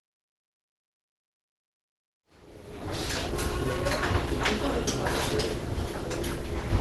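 Throughout the clip the sound is muffled and hoarse, with a grainy, rough texture and no real top end. This is likely Opus compression at a low rate, and the character fits the hybrid speech mode at around 16 kbps. A spectrogram shows a hard ceiling at 12 kHz with nothing above it, and noise-like filled bands in place of clean detail. The smooth fade-in, rising from about 2 s to 3.52 s, carries the same dulled, grainy texture.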